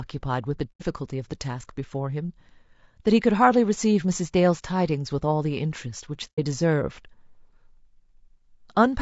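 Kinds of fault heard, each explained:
Low-delay AAC compression: The speech was likely encoded with a low-delay AAC codec of the AAC-ELD kind, whose short frames resolve pitch harmonics poorly. Throughout, the voice sounds plainly rough and grainy, with noise between harmonics, which fits a bitrate of about 32 kbps.
AAC frame loss with muting: Stretches of coded audio went missing, and the decoder replaced them with silence, fading out and back in across overlapping windows. Soft-edged gaps of about 90 ms fall at 0.72 to 0.82 s and 6.29 to 6.39 s, which fits three lost frames each time.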